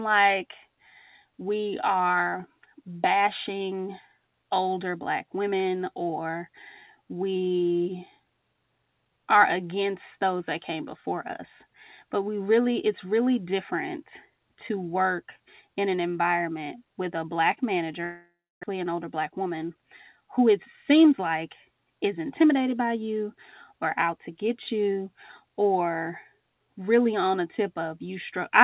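At 18.04 s a long network dropout begins and runs to about 18.65 s. This is likely a break in packet delivery. The receiver fills about 594 ms. It stretches the last sound into a buzz that fades, then leaves silence for about 280 ms. About 400 ms of speech is never played. When the sound returns, it picks up later, with that stretch gone. The playback delay has grown by about a fifth of a second.

Jitter buffer speed-up follows at once, from 18.73 to 20.47 s. The buffer now holds more audio than it wants. To shed it, the receiver cuts out short pitch-period pieces again and again. The speech runs at 107% speed with unchanged pitch, so it sounds hurried. Roughly 150 ms is removed. A second speed-up runs from 20.90 to 21.32 s at 109%, removing a few tens of milliseconds. Throughout, the telephone-band codec leaves nothing above 4 kHz.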